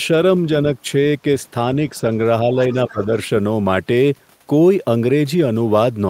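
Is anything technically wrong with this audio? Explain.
Yes, there are two overlapping echo-canceller faults in this speech clip.

From 2.73 to 3.04 s there is the other side's voice leaking through. The echo canceller likely failed to remove all of the far-end signal that the talker's loudspeaker fed back into the microphone. The result is a faint second voice underneath the main talker, well below it at around 25 dB down. It is a brief scrap rather than a clear, sustained voice.

From 2.91 to 3.08 s, overlapping that same stretch, the talker's speech is suppressed in double talk. With both sides sounding at once, the canceller likely could not tell the near talker from the echo and attenuated everything together. The main voice dips by roughly 15 dB, totalling around a tenth of a second, so it briefly sounds pulled back.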